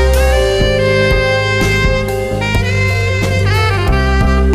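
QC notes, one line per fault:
2.51–4.54 s, time-stretched section: software likely squeezed this stretch to about 1.46× speed by dropping short pieces, so the pace jumps abruptly and sounds rushed at unchanged pitch.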